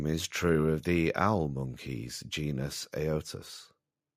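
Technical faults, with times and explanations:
Nothing technical stands out anywhere in this bit of speech.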